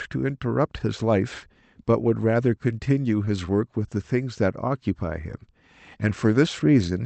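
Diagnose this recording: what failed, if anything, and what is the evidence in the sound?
A short concealed packet loss in the network stage: speech packets arrived too late for the jitter buffer, so the receiver synthesised a continuation of the preceding sound and crossfaded back into real audio. This is audible as a brief smear between 3.25 and 3.31 s.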